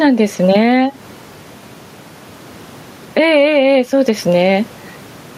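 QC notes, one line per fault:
Throughout: gain pumping, level swinging by around 15 dB with loud and soft parts squashed closer together, likely excessive gain driving a fast limiter.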